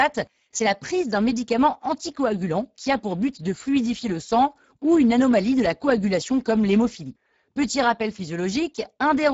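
Speex codec damage throughout this speech clip: a low-bitrate CELP encode, which fits about 10 kbps, starves the excitation, leaving the speech plainly hoarse and noisy, with nothing above 7.7 kHz.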